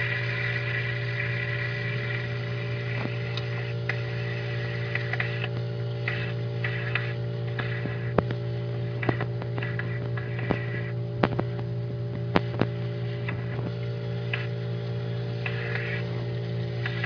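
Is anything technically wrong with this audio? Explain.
No, no technical faults are audible.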